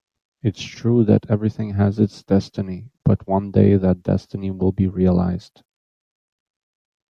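The recorded speech shows no technical faults anywhere in its signal.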